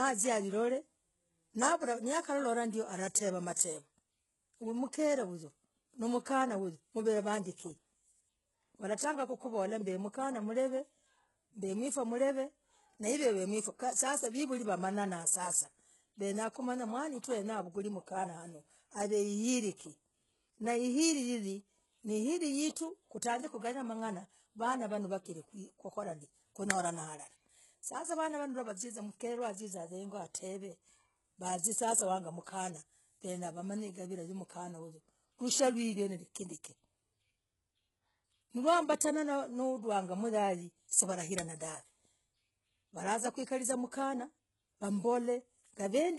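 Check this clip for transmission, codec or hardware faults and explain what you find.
One codec fault runs through the whole speech clip: heavy damage that sounds like HE-AAC compression. The likely cause is a very low-bitrate encode, around 12 kbps. Only the lower spectrum is really coded, and the treble is rebuilt by copying lower bands upward under a coarse envelope. The top reaches higher than plain AAC would at this rate, but s sounds turn gritty, metallic or lispy. On a spectrogram, the upper band shows blurred, repeated copies of lower patterns, with harmonics misaligned across the crossover, and nothing appears above 11.5 kHz.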